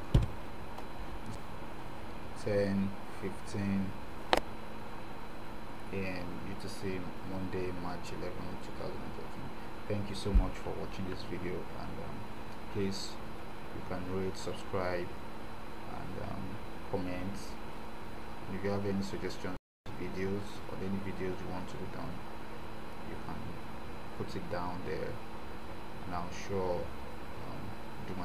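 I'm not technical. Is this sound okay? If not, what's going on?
No. There are two CD skips, at 1.35 s and 15.16 s. Each time, the player's laser lost its place and landed on a different turn of the disc's spiral track. The player goes silent for a tiny moment, only a few thousandths of a second, then carries on from the new spot. You hear a small tick followed by an abrupt jump, as if a bit of the audio was skipped or repeated.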